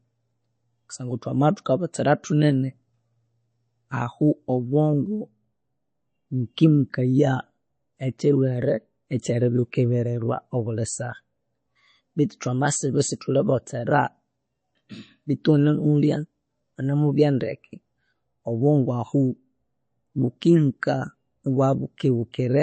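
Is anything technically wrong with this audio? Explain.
Yes. Throughout the speech there is a watery, swirly quality, and the treble stops dead at 8.3 kHz. This is likely MP3 compression at a bitrate near 32 kbps. Short of bits, the encoder cut the treble and zeroed weak frequency lines, which blink on and off between frames. A spectrogram shows a flat ceiling at 8.3 kHz with flickering holes below it.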